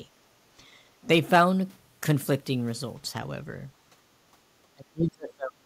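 From 4.73 s to 5.65 s the speech is pushed down hard, falling by something like 35 dB at its deepest and staying suppressed for close to a second. This is speech suppressed in double talk, likely an echo canceller attenuating the near talker while the far side was also active.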